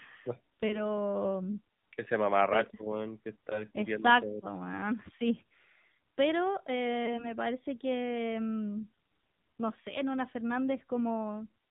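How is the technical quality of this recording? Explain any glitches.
The technical quality is poor: the whole clip of speech has the audible damage of the AMR narrowband mobile codec, and it has three short glitches.

AMR narrowband mobile codec: everything above 4 kHz is missing and the voice sounds buzzy and synthetic. The codec rebuilds speech from a vocal-tract model and a few pulses. The damage is consistent with a low mode of about 7.4 kbps. A spectrogram shows a hard ceiling at 4 kHz.

Lost AMR speech frames: at 0.68 to 0.86 s, at 3.50 to 3.65 s just after "ese mamarracho weón que", and at 7.06 to 7.35 s just before "parece que mm". Each time a single 20 ms frame failed. The decoder stretched the previous pitch and tract settings with falling gain, so each glitch sounds like a brief warble or dip, and the voice comes back rough. A waveform shows a short sag in level, and a spectrogram shows smeared harmonics.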